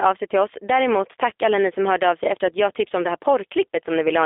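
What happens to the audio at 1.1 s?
At 1.1 s the speech is passing through the G.729 codec, whose damage runs the whole clip. The coder, which fits an 8 kbit/s rate, rebuilds each 10 ms frame from a vocal tract filter, a pitch predictor and a few pulses, so the speech sounds rough and faintly synthetic. A spectrogram shows everything below 300 Hz and above 3.6 kHz missing, with blurred harmonics in between.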